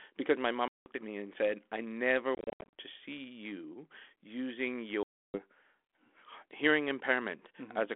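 Speech over a narrow telephone band with three hard-edged dropouts: about 180 ms of silence from 0.68 to 0.89 s, a stuttering patch from 2.35 to 2.73 s where about 250 ms is lost in short gaps up to 70 ms, and about 310 ms gone from 5.03 to 5.39 s. Each hole ends with a brief, slightly distorted onset. This is packet loss on an ADPCM call, roughly twenty to thirty packets per event. The decoder's adaptive predictor and step size drift from the sender's until they resynchronise. The light coding grain fits 32 kbit/s G.726.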